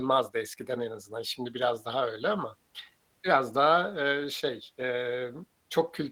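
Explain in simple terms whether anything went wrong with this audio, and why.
Nothing went wrong here.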